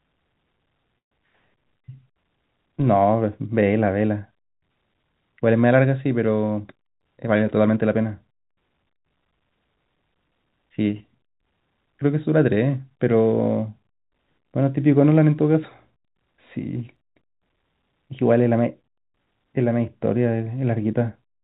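At 0.98 s the speech stops for about 0.15 s, nearly all of it silent, then resumes exactly where it left off with nothing lost. This is likely a call audio freeze: delayed packets left the jitter buffer empty, inserting a gap. From 6.43 s to 7.77 s the speech runs hurried at about 109% speed with unchanged pitch. This is a jitter buffer speed-up: the receiver trimmed pitch-period slices, around 150 ms in total, to shrink an overfull buffer. At 7.01 s, 11.99 s and 16.96 s there are tiny skips, evenly spaced 5 s apart, each dropping roughly 20 ms with the two sides butted together. The likely cause is audio missing between chunks as a recorder or processor switched from one 5 s block to the next. Throughout, the G.711 A-law call path keeps everything below 4 kHz, giving the audio its narrowband telephone sound.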